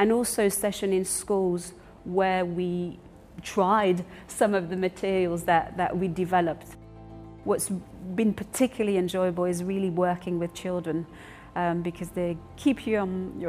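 No technical faults can be heard anywhere in the audio.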